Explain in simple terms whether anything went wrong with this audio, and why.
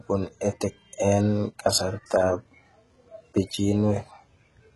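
Yes, something's off, and it runs through the whole recording. The speech has been heavily squeezed, most likely by HE-AAC compression. That kind of codec keeps only the lower part of the sound and fakes the treble by copying lower bands upward. Here the treble is there but not quite right, with harsh, gritty s sounds, and nothing at all above about 11.5 kHz.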